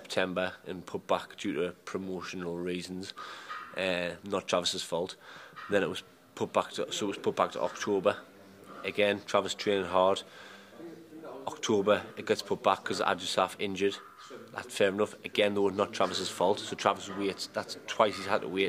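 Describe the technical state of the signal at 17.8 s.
At 17.8 s the signal is intact, with no audible fault at that moment.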